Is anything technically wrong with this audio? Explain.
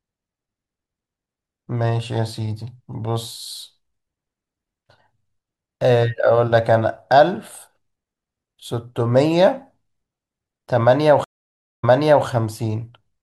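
Yes. Stream reconnect from 11.24 to 12.26 s: the connection dropped and a fresh decoder restarted, leaving 0.59 s of silence, then the speech resumes 0.43 s earlier and repeats.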